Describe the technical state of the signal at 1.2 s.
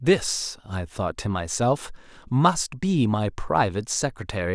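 At 1.2 s the speech signal is intact, with no audible fault at that moment.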